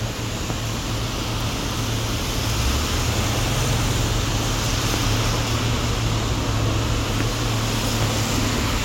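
Nothing in this recording of sounds stood out as a technical problem on listening.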